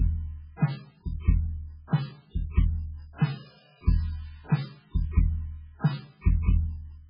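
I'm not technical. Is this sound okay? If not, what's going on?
No. MP3 compression affects the whole clip. Nothing is left above about 5.2 kHz, so the music sounds dull, as if behind a blanket, and it has a watery, swirling quality. This is likely from saving the file very small. To save space, the encoder discarded the treble and the quieter details, and those details flicker in and out from moment to moment.

Pre-echo occurs at 1.87 s and 2.51 s. Just before each of those sharp hits there is a short hiss, about 52 and 57 milliseconds long, and the hits sound softened. The encoder handles sound in small blocks and spreads its noise across each whole block, so the noise meant for a loud hit also spills into the quiet moment just before it.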